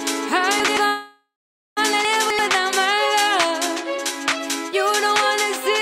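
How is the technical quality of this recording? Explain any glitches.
The recording has three glitches: two stretches where audio plays out of order and one freeze-like gap.

Chunks out of order, 0.60 to 0.77 s and 2.05 to 2.39 s: an 85 ms chunk arrived one chunk late, then another three chunks late, so the audio jumbles briefly.

Call audio freeze, 0.87 to 1.79 s: the sound stalls for about 0.9 s, fading into roughly half a second of silence before resuming. This is likely from delayed packets draining the jitter buffer.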